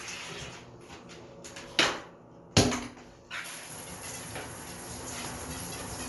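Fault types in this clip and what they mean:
Bluetooth LC3 compression: nothing above 11.5 kHz throughout, with a plainly grainy, noise-filled top end, likely LC3 near 48 kbps in 10 ms frames.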